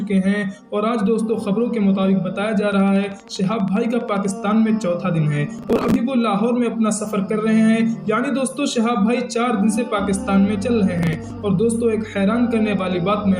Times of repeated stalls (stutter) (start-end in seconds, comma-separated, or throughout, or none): none